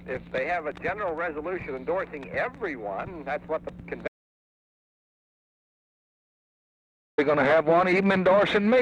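At 4.08 s the sound cuts off abruptly into an audio dropout to silence lasting 3.10 s, until 7.18 s. The gap is silent with no room tone, likely from the input being lost while recording continued, and whatever occurred there is gone.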